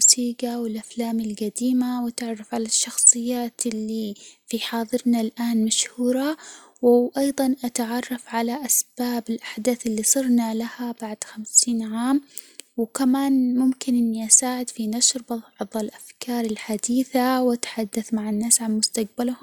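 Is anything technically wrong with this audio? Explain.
No, nothing technically wrong can be heard here.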